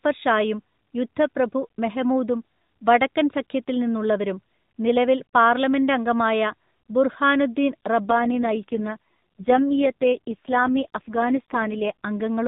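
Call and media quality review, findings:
AMR rate drop, 8.10 to 11.92 s: speech turns rougher and more synthetic, band unchanged, no gap. Sounds like AMR-NB adapting down for a weak radio link, consistent with 12.2 falling to 4.75 kbps, then recovering.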